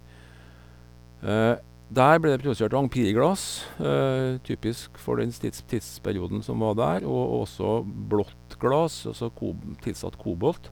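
From start to finish, sharp switching spikes from the 60 Hz mains supply leak into the signal path twice per cycle, spreading harmonics up to several kHz. The result is mains buzz: a steady, raspy drone sitting roughly 25 dB below the speech.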